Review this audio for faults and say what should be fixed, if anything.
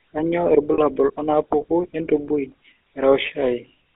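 The speech throughout has a buzzy, gravelly roughness, with nothing below 300 Hz or above 3.6 kHz. That is the GSM full-rate codec: it rebuilds the voice from a vocal-tract model driven by sparse pulses, and the damage is plainly audible, consistent with a 13 kbps coder. Prevent it by carrying the audio over a wideband codec instead.

From 0.74 to 0.80 s the sound freezes into a short, rough metallic ring lasting about 40 ms. These are lost GSM frames, which fits two missing 20 ms frames, each filled by repeating the last good frame. Prevent it with error protection or retransmission on the link so that frames arrive intact.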